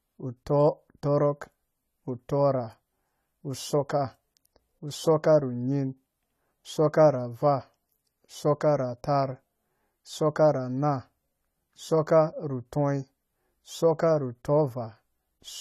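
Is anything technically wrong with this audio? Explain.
Yes. Throughout the speech there is plainly audible AAC compression damage, likely from AAC-LC encoding at a low bitrate, which fits roughly 32 kbps. Nothing reaches above 14 kHz, so the sound is dull, and sibilants take on a fizzy, warbling smear. On a spectrogram this shows as a hard ceiling at 14 kHz.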